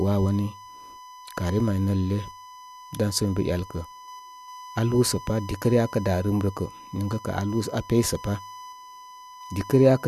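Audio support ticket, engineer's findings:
USB whine throughout: fixed-pitch 1 kHz tone under the speech, roughly 20 dB down. USB 1 ms frame current leaking into the audio path via power or ground.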